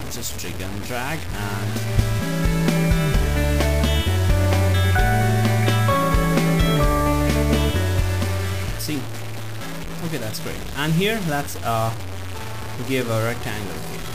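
Throughout the clip, a coarse, signal-following distortion sits only around 15 dB below the sound, most exposed in quiet passages. The likely cause is low bit depth without dither: truncation to roughly 5 bits, leaving rounding error that tracks the audio.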